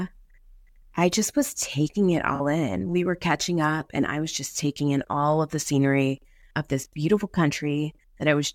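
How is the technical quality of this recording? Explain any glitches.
One brief glitch stands out. At 2.35 to 2.40 s, right after "just was taking it", a short smeared, noisy patch replaces about 43 ms of speech. This is AAC frame loss with concealment: the decoder, missing data consistent with two lost frames, rebuilt the gap from the last good spectrum.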